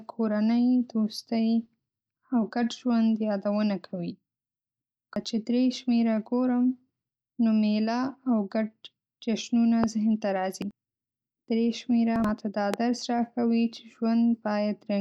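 At 1.65 s a corrupt FLAC frame gives a tiny error, peaking at only about -57 dBFS. Damaged bits sent the decoder's prediction off course, and the next intact frame came back clean. Unlike a pop, this error is part of the decoded signal itself rather than something added on top, and it is very faint instead of sharp and loud.

At 5.16 s the first of three skips of compressed frames occurs. Whole frames of audio were never played, so the speech jumps forward by about a sixth of a second. The second skip, at 10.62 s just after "ګډ جشنونه ذهن ته", drops roughly a third of a second. The third, at 12.16 s just before "دا درس", loses about a sixth of a second. The giveaway is missing material, not added noise.

At 9.84 s, between "میله او ګډ جشنونه" and "ذهن ته", a loud pop lands on top of the speech, peaking about 15 dB above it. A second single pop follows at 12.74 s at a similar level. Both are most likely a voltage step from a plug, switch or static discharge. 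Unlike the skips, nothing is lost: the speech carries on underneath each brief, sharp pop.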